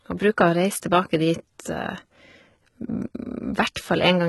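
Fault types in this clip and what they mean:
HE-AAC compression: The treble is bright but synthetic, with s sounds gritty and metallic, harmonics that fail to line up above the crossover, and nothing at all above 11.8 kHz. This likely comes from HE-AAC, which codes only the lower spectrum and rebuilds the top by copying lower bands upward under a coarse envelope. The heavy damage fits a very low bitrate, around 16 kbps. Plain low-pass filtering would sound dull instead of falsely bright.
pre-echo: At 0.81 s, a sharp attack is preceded by a brief hiss about 12 ms long, and the onset itself sounds softened and smeared. The transform coder spread quantisation noise across its whole block, so noise sized for the loud attack also filled the quiet gap just before it. Because the hiss comes before the attack, it differs from a click, which is instantaneous, and from reverb or echo, which trail after the sound.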